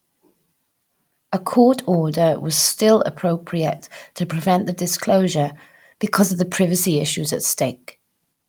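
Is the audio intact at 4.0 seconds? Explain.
Yes, the speech is intact at 4.0 seconds, with no audible fault at that moment.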